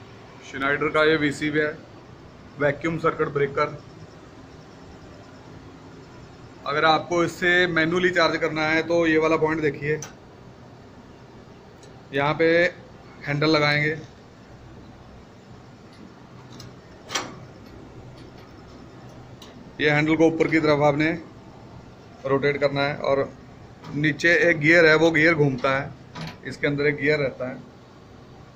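No dropouts, clicks, distortion or other technical faults can be heard anywhere in the recording, and the signal holds steady throughout.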